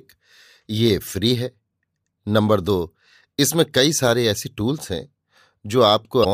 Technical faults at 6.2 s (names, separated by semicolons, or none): damaged data in a compressed stream